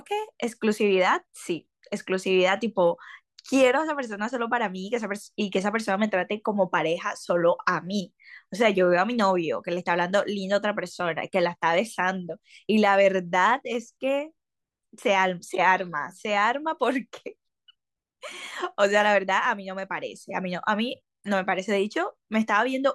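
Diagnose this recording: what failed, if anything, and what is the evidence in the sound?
Nothing failed; no faults heard.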